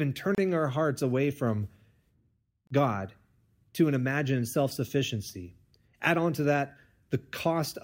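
The speech drops out twice, at 0.35 s and 2.67 s, for about 30 ms each. These are gaps at a join of encoded pieces. Untrimmed encoder delay and padding leave short silences with smeared edges before the sound resumes.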